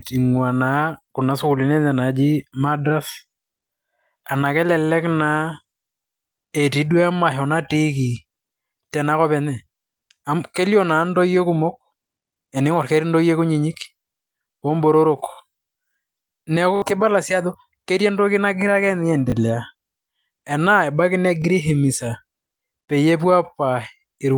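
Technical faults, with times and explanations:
6.48, 16.76 to 16.82, 19.3 and 21.42 s, repeated buffer: the last 20 ms of audio plays again, once at three points and three extra times at 16.76 s, giving a short 50 Hz buzz. Unlike a dropout, no silence is heard, and the repeated content is identical each time.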